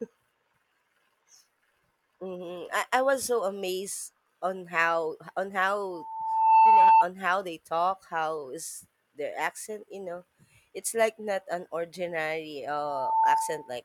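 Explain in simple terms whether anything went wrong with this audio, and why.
Something went wrong twice: a loudspeaker feedback squeal at 5.91–7.06 s, and again at 12.68–13.76 s, just after "like not an ordinary". The microphone picked up its own loudspeaker. One pitch, 892 Hz, kept feeding itself and swelled within a second into a whistle louder than the speech.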